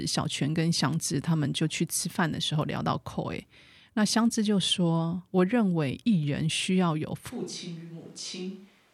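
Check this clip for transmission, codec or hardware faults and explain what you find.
One fault appears, a switch to a distant microphone. From 7.31 s to the end, the sound abruptly turns roomy and hollow, with thinner bass. The level drops by about 10 dB. Room noise rises to roughly 25 dB below the speech. The close microphone's feed has likely been lost, leaving a far-off pickup.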